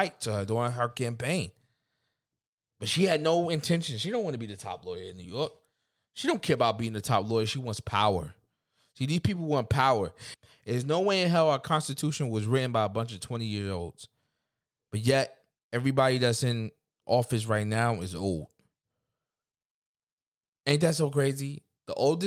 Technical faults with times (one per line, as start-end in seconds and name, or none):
none